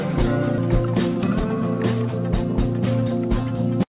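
At 0.58 to 0.60 s there's a skip ahead: playback just jumps forward, with no gap or fill. Something like 0.7 s of audio is simply gone, and the two sides are butted together almost directly, so it sounds like a sudden lurch. What's happened is that a stretch of audio got dropped, either in transit or by the jitter buffer overflowing, while later audio was already queued up behind it.

Then from 1.08 to 1.46 s you get a jitter buffer speed-up. The sound runs at about 130% of normal pace but the pitch stays put, so it comes across as hurried rather than chipmunky. That's the receiver trimming its backlog by cutting out lots of tiny pitch-period-sized slices in a row, roughly a tenth of a second in total, to bring the delay back down. Underneath all of this the call path sounds band-limited, with nothing above 4 kHz, which fits G.711 mu-law at 64 kbps.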